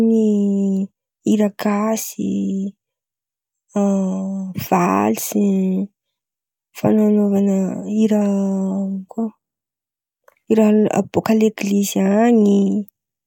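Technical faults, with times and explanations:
No technical faults can be heard anywhere in this speech recording; the signal stays stable and intact over its whole length.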